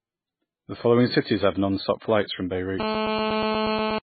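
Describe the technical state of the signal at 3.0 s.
At 3.0 s the speech sits under a hard, raspy GSM phone buzz running from 2.80 to 3.99 s. A 2G handset transmitting in bursts 217 times a second has its radio pulses rectified by the audio circuitry, producing a 217 Hz tone with dense harmonics at about 2 dB below the speech. It holds steady, as during a call. Unlike mains hum at 50 or 60 Hz, it is gritty rather than smooth and bears no relation to the speech.

Underneath, and across the whole clip, the sound is dull and watery. Nothing survives above 4.5 kHz, and weak spectral detail flickers on and off, most likely from heavy MP3 compression at a very low bitrate around 16 kbps. That swirling separates it from a simple low-pass filter, which would dull the sound without the warbling.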